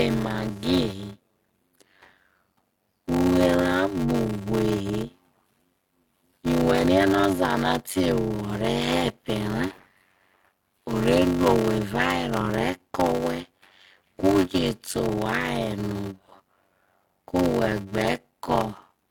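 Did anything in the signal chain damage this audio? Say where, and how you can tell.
Yes: a block size mismatch (padded) in the driver or buffer. Throughout, zero-filled gaps in every block produce a 93.8 Hz buzz and slow the speech to 0.625x.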